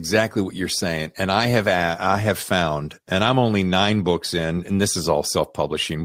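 Nothing stood out on listening to the speech in this recording.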